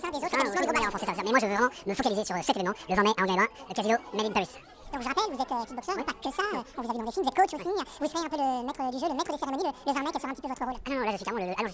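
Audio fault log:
Throughout, wrong sample rate: the whole clip sounds hurried and shrill, running at twice normal speed with pitch raised a full octave (12 semitones), because the samples are played at double their recording rate without conversion, which fits 8 kHz material played back at 16 kHz.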